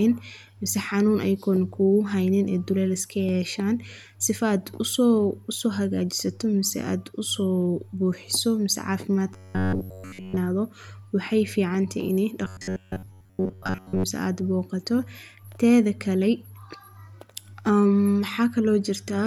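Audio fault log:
9.33–10.38 s and 12.45–14.04 s, robotic sound from repeated short buffers: rigid 93.8 Hz metallic buzz, total then partial, likely ~10.7 ms chunks looping; spectrogram shows fixed harmonic stripes.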